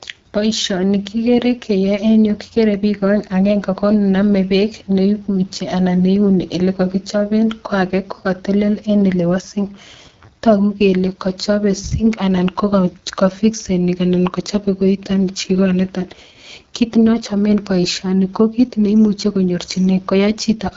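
From start to finish the speech has passed through the AMR wideband (HD Voice) codec at a low rate, which fits 8.85 kbit/s, the second-lowest AMR-WB mode. At that rate the codec models the voice with too few pulses to follow it closely, so the speech comes out rough and raspy, with plainly audible coding damage. The band stops at about 7.4 kHz, and the top of it is filled with shaped noise rather than real detail.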